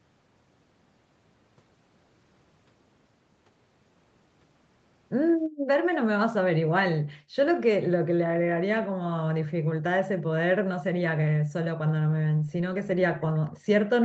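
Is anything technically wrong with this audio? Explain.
Yes. There are two kinds of fault in this speech clip.

Background gated by the echo canceller: this happens three times, at 5.48 to 5.71 s, 7.17 to 7.36 s and 12.32 to 12.52 s. Each dip lasts about a fifth of a second. The room sound falls by about 40 dB and then returns. The echo canceller heard far-end sound on the loudspeaker. It cut the microphone hard to block any echo, and it took the background with it.

Echo leak: a brief, faint delayed copy of the sound appears at 13.54 to 13.59 s. It trails the original by 306 ms and sits very far below the main speech. This is likely a loudspeaker echo that the far side's canceller failed to remove. That residue was sent back down the call. Because it is so short and quiet, it registers as a small ghostly scrap, not a clear repeat.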